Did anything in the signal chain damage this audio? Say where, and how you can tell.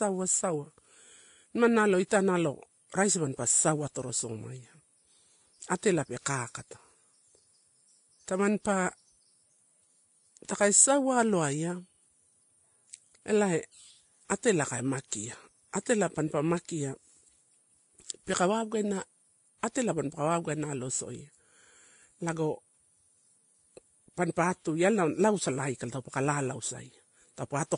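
Yes, at the codec stage, across the whole speech clip. There is nothing above 10.5 kHz, and the artefacts of a low-bitrate encoder sit under a second, different codec texture. This points to transcoding between lossy codecs, likely a low-rate Vorbis encode re-encoded to WMA at a higher rate. The later encoder spent its bits reproducing the earlier damage, added its own, and kept the lower bandwidth limit.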